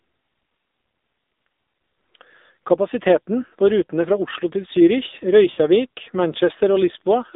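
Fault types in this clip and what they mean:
AMR narrowband mobile codec: The speech sits in a narrow telephone band, roughly 250 Hz to 3.7 kHz, with nothing above 4 kHz. The coding damage is plainly audible, a buzzy, synthetic edge that fits a low mobile rate around 7.4 kbps, where few pulses per subframe model each sound.
lost AMR speech frames: At about 5.52 s a 60 ms stretch, consistent with three consecutive 20 ms frames failing their checks, is concealed by repeating the last good pitch and vocal tract settings at falling gain. The sound is briefly drawn out and sags toward silence until 5.6 s.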